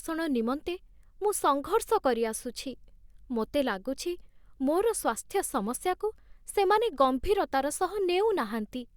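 A speech recording with no technical faults to point out. Nothing in it calls for a time or a cause.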